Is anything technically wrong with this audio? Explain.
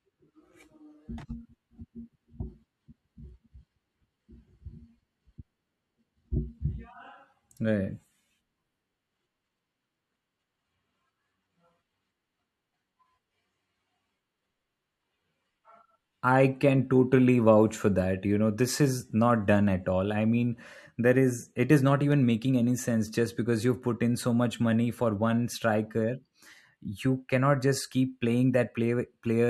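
Yes, there are CD scratch ticks from 21.87 to 22.37 s: three tiny clicks, the longest around a millisecond, where a scratch beat the error correction once per disc turn and the player patched the samples.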